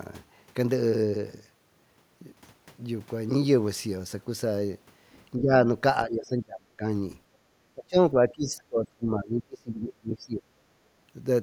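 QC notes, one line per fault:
5.37–5.65 s, 6.05–6.84 s and 7.75–10.49 s, speech suppressed in double talk: the speech dips and breaks into pieces, mildly at first (about 15 dB), then deeply (about 30 dB and 25 dB), with the last stretch chopped for roughly three seconds. This is likely an echo canceller clamping down while the far end talks over the talker. The drops track the overlap and gate on and off unevenly, unlike a steady dropout or a fixed gain change.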